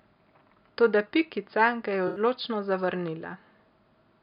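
Just after "ga je", from 2.07 to 2.20 s, the sound turns briefly smeared and noisy: AAC frame loss with concealment, where about 85 ms of frames were patched from the last good spectrum.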